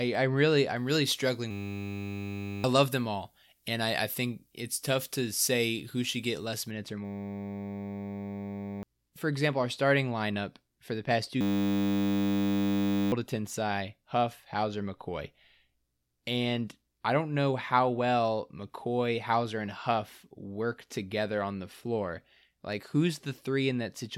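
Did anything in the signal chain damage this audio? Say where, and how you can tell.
Yes. From 0.76 to 6.71 s the sound is thin, bright and sibilant: the treble rises along a 75 µs FM pre-emphasis curve to about 13 dB above 1 kHz at 10 kHz. This is pre-emphasis left on, meaning the matching de-emphasis was never applied in the transmission or playback stage. It differs from a deliberate EQ boost in its shape, a smooth shelf that tracks the standard time constant, and in the fact that it stops cleanly at 6.71 s.

A system hang loop, at the driver or buffer stage, appears three times: 1.51 to 2.64 s, 7.05 to 8.83 s (ending just before "for example our starting"), and 11.41 to 13.12 s (starting just after "for the past two"). Each time, the same 10 ms slice repeats exactly, giving a steady 100 Hz buzz, which fits a 10 ms ring buffer cycling while the host froze. About one, two and one and a half seconds of audio are lost. 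Identical repetition at a fixed pitch distinguishes this from dropouts or packet-loss concealment, which would produce silence or fading.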